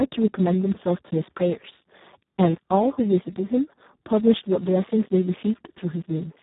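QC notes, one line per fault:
Throughout: Speex codec. The speech sounds hoarse, buzzy and close to robotic over the whole clip, which points to a very low bitrate of about 4 kbps. At that rate the CELP coder has almost no bits to describe the excitation, so its pulses and noise replace the natural voicing. Nothing is heard above 3.8 kHz. Consonants lose their crispness and the sound is narrow and muffled.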